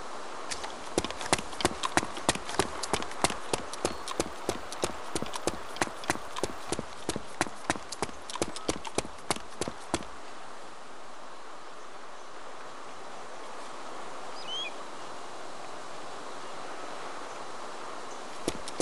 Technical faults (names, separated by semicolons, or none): resampler restarted on every block